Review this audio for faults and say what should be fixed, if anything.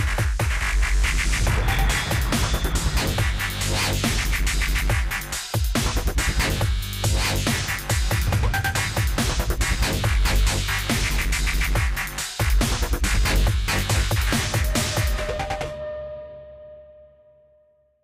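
Nothing stood out on listening to the recording, so there is nothing here that needs fixing.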